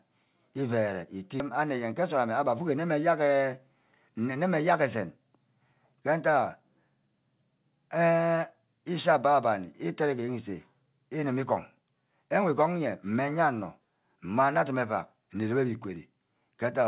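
At 1.4 s, a skip ahead: about a second of audio was discarded while later packets waited, so playback leaps forward and the two sides join with no audible gap.

From 2.0 to 2.78 s, a jitter buffer speed-up: the overfull buffer trimmed around 50 ms of pitch periods, so the speech runs about 6% fast at unchanged pitch. Throughout, nothing above 4 kHz, consistent with a G.711 mu-law call path.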